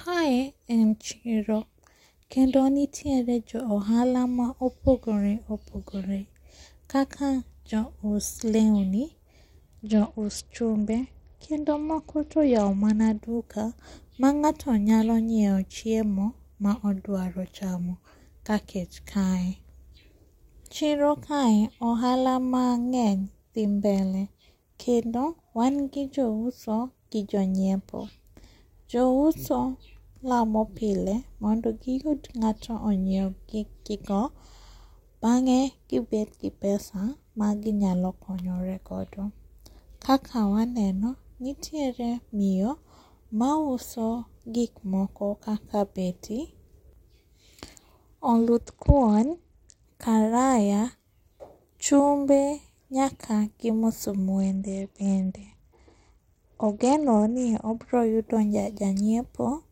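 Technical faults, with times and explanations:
9.83–13.22 s, 48.63–49.84 s and 54.39–57.94 s: Bluetooth SBC bit pool drop. The treble goes dull and a gritty noise rises under the speech, then clears as each stretch ends. The first ends just before "duka mang'ato". The sound points to the link falling from a bit pool of 31 to about 9, near 72 kbps. With so few bits, the upper sub-bands get almost nothing and the rest are coarsely quantised.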